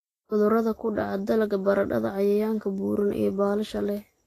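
Throughout the speech, treble stops near 14.2 kHz and sounds hissy and grainy. This is likely Vorbis compression, coarsely quantising high detail, which fits roughly 33 kbps.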